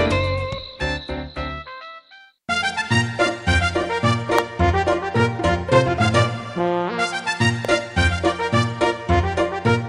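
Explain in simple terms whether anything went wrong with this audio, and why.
Two sharp snaps cut through the audio, at 4.39 s and 7.65 s. The first is very loud, the second softer. Each is an electrical switching spike, likely from a nearby switch, motor or static spark that the audio cable picked up.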